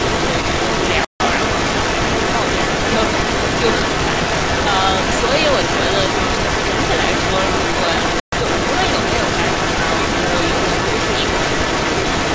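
From 0.0 s to the end, an echo leak runs through the speech: a second copy trails the speech by about 427 ms at roughly the same loudness. It is likely an echo canceller failing on a loudspeaker-based far end. The fixed delay sets it apart from room reverberation, which smears rather than repeats.

At 1.05 to 1.20 s and 8.20 to 8.32 s, playback stalls cut the sound for about 150 ms and 125 ms. The output likely ran short of data. Unlike packet-loss dropouts, each gap is clean silence.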